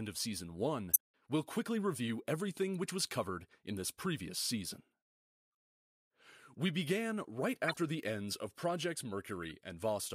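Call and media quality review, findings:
Corrupt frame decoded, three events. 0.93–0.97 s, just before "we'll quickly review everything": loud corruption across a few frames. 7.68–7.76 s, between "began right" and "the ends of": moderate corruption. 9.43–9.51 s: faint corruption. Decoder played damaged frames, so misread gains and codes put energy at the wrong frequencies. Spectrogram: short misplaced bands or blocks, frame-length wide. Waveform: brief out-of-place bursts, the first clearly visible.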